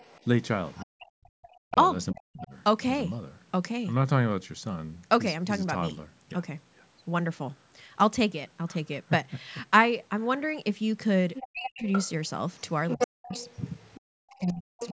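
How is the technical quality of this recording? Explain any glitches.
The recording has two recurring echo-related problems in a speech clip that passed through call microphone processing, with nothing above 8 kHz.

Other side's voice leaking through occurs at 0.00–0.85 s, 11.35–12.11 s and 12.88–14.93 s. This is likely residual echo: the far talker's loudspeaker output was picked up by the microphone and not fully cancelled. It is faint at first, about 25 dB below the speech, then stronger later, around 10 dB below. A spectrogram shows a second harmonic pattern beneath the main voice.

Speech suppressed in double talk occurs at 0.84–2.53 s, 11.41–11.84 s, 12.95–13.35 s and 14.25–14.80 s, each overlapping the leakage. With both sides active, the canceller likely clamped down on everything, cutting the talker by as much as roughly 40 dB. The waveform shows sudden notches and gaps in the envelope, and the spectrogram shows the upper frequencies vanishing in patches.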